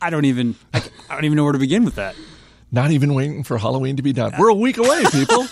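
Nothing stood out on listening to this speech recording.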